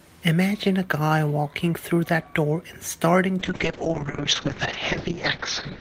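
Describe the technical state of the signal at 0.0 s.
The signal at 0.0 s is intact, with no technical fault at that moment.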